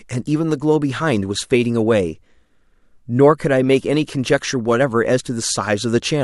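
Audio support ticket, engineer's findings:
No faults found on listening; speech path behaves as expected with no dropouts, distortion or level anomalies to trace.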